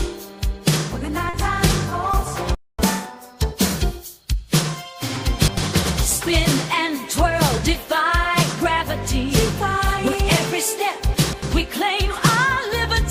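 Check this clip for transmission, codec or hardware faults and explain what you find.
Four kinds of transmission fault are audible: brief concealed dropouts, a stall followed by sped-up catch-up, and two jumbled passages.

At 1.29 to 1.35 s, 1.89 to 1.93 s and 2.11 to 2.15 s there is short concealed packet loss: quick smears or wobbles. About 40 ms, then 20 ms twice, never arrived, and the decoder bridged each gap by extending the preceding sound before blending back.

From 2.55 to 2.79 s the audio simply stops for about 240 ms. This is a playback stall, likely the player running dry of data or being blocked, so the output fell silent until it recovered.

Straight after, from 2.79 to 3.75 s, the sound runs fast and high, at 1.25 times speed and roughly four semitones up, before settling. This is catch-up at higher speed: the player resampled its backlog to recover the time lost in the stall.

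Around 5.39 to 5.57 s and again at 11.15 to 11.42 s the audio sounds garbled. These are chunks out of order. A segment of about 93 ms played late, after material that should have followed it. In the first case it is displaced by about one chunk, in the second by about two.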